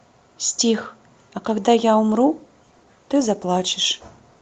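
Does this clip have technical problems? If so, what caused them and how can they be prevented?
Yes. A call bitrate drop starts at 2.08 s and lasts until the end of the speech clip. Before it, the Opus call path carries the speech with content up to about 8 kHz. From 2.08 s the sound turns coarser and rougher, and it is at its worst for about 1.5 s. That points to the call's bandwidth estimate falling and the encoder being pushed from around 64 kbps down to roughly 17 kbps, which leaves too few bits to code detail. To prevent this, give the call a stable, uncongested network link and set a sensible minimum bitrate so the encoder never falls this low.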